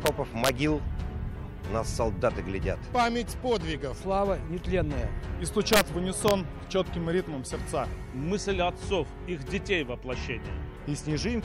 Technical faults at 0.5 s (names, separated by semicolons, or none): integer overflow